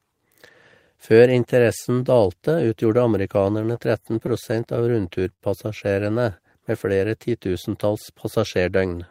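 Speech, with repeated stalls (stutter) from 3.43 to 5.43 s after "interessen dalte utgjorde": eleven brief holds, the longest 65 ms, filled by continuing the preceding sound, so nothing is lost, unlike dropouts. From 8.6 to 9.04 s, after "flere titusentalls", jitter buffer speed-up trims roughly 70 ms in small pitch-period cuts, running about 113% speed at unchanged pitch, unlike a pitch shift.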